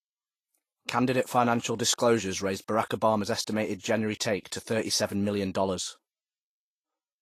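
From start to finish the speech carries plainly audible lossy-coding damage, most likely Vorbis compression at a low quality setting, around 29 kbps by the sound of it. Nothing is present above 14.2 kHz, where the encoder has cut the band off. Below that, the treble has been quantised so coarsely that fine detail is replaced by noise of similar energy, so the speech turns hissy and grainy, voiced tones sound roughened, and consonant attacks are blurred.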